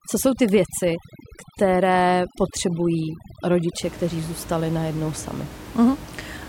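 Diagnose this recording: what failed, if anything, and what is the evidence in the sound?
From the start to about 3.83 s, the background collapses to near silence dotted with twinkling specks. That is overdone noise removal in the call processing stage. The suppressor was set too aggressively and pulled individual frequency bands down or out whenever they sat close to its noise estimate, taking quiet speech detail along with the room noise. After 3.83 s that room noise returns at about 16 dB below the speech.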